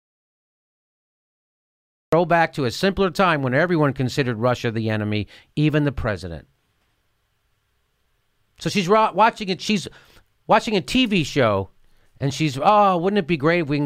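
Silence without room tone runs to 2.13 s, then speech cuts in at "back to a simpler": audio dropout to silence, likely from lost input.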